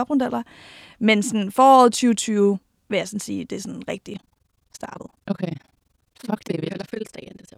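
From 4.14 s, right after "sige det er sådan", to the end at 7.58 s, the speech takes on a harsh, rough flutter near 20 Hz, pumping about 60 dB deep. This is overlap-add ripple: the frames were rejoined with overlaps that don't sum to constant gain.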